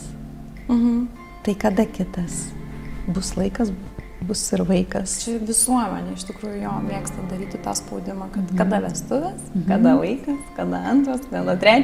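Nothing here gives me anything to flag, since the audio holds steady the whole way without a single technical problem catching my ear.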